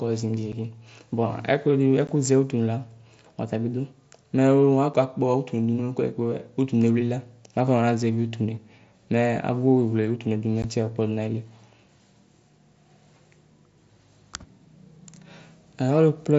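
A speech recording carried over an mSBC wideband headset link shows unconcealed Bluetooth headset packet loss: abrupt holes of about 7.5 ms at 0.52 and 4.94 s and 15 ms at 2.07 s and 10.62 s, just after "agbugbɔwle utunuedu". The holes are bare gaps with hard edges, not smoothed or repeated audio.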